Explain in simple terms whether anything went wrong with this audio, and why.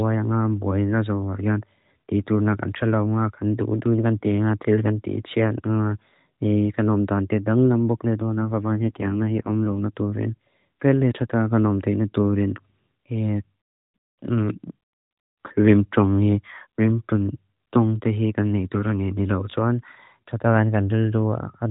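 From 8.41 to 9.81 seconds, the phone network briefly told the mobile speech codec to squeeze the voice into far fewer bits, saving the rest to protect against errors on a weak radio link. This is an AMR rate drop. You don't hear a gap or a muffled tone; instead the speech turns rougher, buzzier and more machine-like for those moments, then clears as the rate climbs back to the phone-call quality heard elsewhere in the clip.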